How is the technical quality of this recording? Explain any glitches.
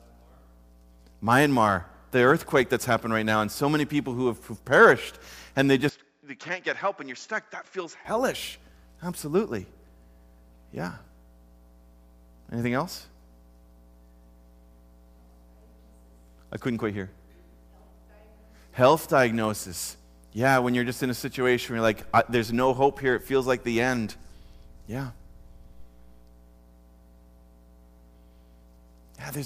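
The recording has one clear glitch, a brief stretch where the input switched to a poorer device.

From 5.89 s to 8.05 s the sound abruptly loses its top end, with nothing above 7.5 kHz, and the level drops by roughly 10 dB. A different background noise appears, sitting well below the signal. The change happens with no gap at either boundary. This points most likely to the system swapping to another, narrower-band microphone or headset profile mid-recording and then switching back, each device bringing its own bandwidth, gain and noise.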